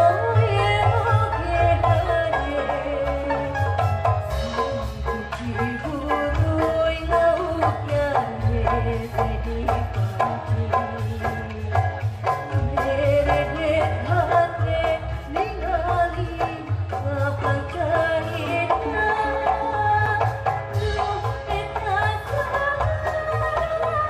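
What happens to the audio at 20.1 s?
At 20.06 s the sound drops out in a block of digital silence. The gap lasts about 5.8 ms. The output cuts straight to silence and straight back, with no fade at either edge. The program likely failed to fill its output buffer in time. The gap's length fits a 256-sample buffer. A hole this short is heard less as a gap than as a single sharp tick or dip.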